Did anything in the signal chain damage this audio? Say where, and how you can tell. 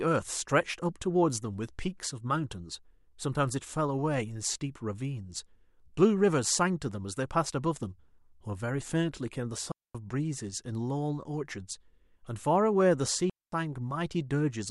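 Yes. Digital wireless dropouts at 9.72–9.95 s and 13.30–13.52 s, each a clean mute of about 230 ms at the radio link. Both holes fall to near silence through a very short fade, with no noise burst on either side, as the receiver mutes after losing too much data.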